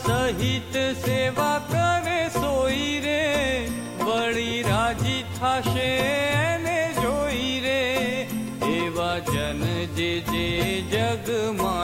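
From start to finish, a gritty, grainy distortion rides on the sound at roughly 30 dB below it, which fits 7-bit rounding and is likely low bit depth without dither. Unlike steady dithered hiss, this grit follows the signal, roughest on quiet passages.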